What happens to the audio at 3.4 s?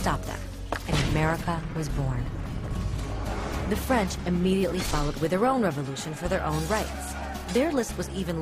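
Nothing goes wrong at 3.4 s; the audio carries on intact through that moment, with no dropout, click, glitch or other fault to be heard there.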